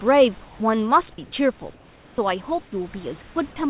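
At 1.74–2.18 s, 2.64–2.72 s and 3.22–3.36 s, the room background in the speech pauses turns into flat, featureless hiss about 2, 7 and 7 dB quieter. This is likely comfort noise in place of the background. On a spectrogram these gaps show smooth, uniform texture below 4 kHz, and the waveform shows a small level dip.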